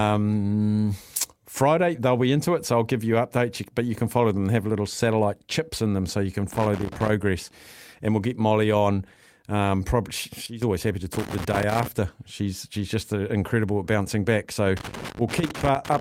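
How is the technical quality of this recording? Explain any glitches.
The technical quality suffers from two kinds of glitch: three bursts of loose connector crackle and one sudden gain jump.

Loose connector crackle occurs from 6.52 to 7.10 s, from 11.13 to 11.88 s, and from 14.77 s through the end of the recording. A worn contact repeatedly makes and breaks, chopping the speech and adding pops from any DC on the line. It sounds like irregular scratching. On a spectrogram it shows as scattered full-height vertical streaks, and on the waveform as ragged spikes and gaps.

The sudden gain jump comes at 10.46 to 10.62 s. The level of the speech and the background noise drops together by about 12 dB in one step. The likely cause is a digital gain change applied without a ramp. The waveform envelope shrinks abruptly at that point, and the spectrogram darkens evenly across all frequencies.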